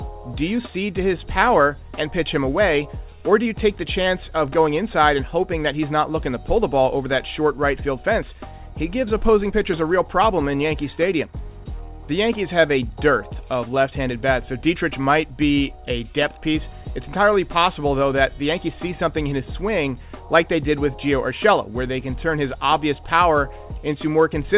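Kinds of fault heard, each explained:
Clock drift between sender and receiver: the sending clock runs about 5 percent fast against the receiver's, so the jitter buffer keeps overfilling for the whole clip. Unlike random network jitter, the resulting hiccups never change direction or settle, because the mismatch is constant.
Repeated timing corrections: from 0.08 s to 24.57 s the receiver keeps trimming short pieces to stay in step, an effective 105 percent pace. These are cuts, never repeats or silent gaps, so the sound has unevenly spaced small skips and slightly rushed timing.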